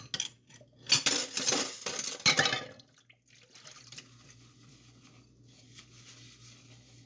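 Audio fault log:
Nothing to log here: these sounds come through without any problem I can hear.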